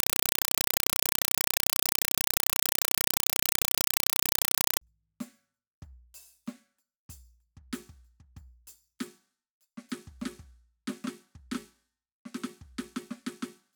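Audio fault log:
0.00–4.81 s, compressed stream played as audio: in place of the music there is very loud, chattering static. The data are being treated as ordinary samples instead of being decoded. Each frame arrives as a 4 ms burst of noise followed by silent padding, repeating 31.25 times a second, which fits an undecoded AC-3 stream around 192 kbps. That steady 31 Hz chatter, with no trace of the music underneath, distinguishes it from broadband hiss or crackle layered over real sound.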